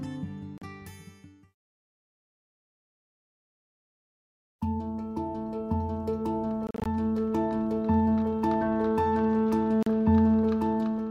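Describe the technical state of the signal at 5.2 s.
At 5.2 s the signal is intact, with no audible fault at that moment.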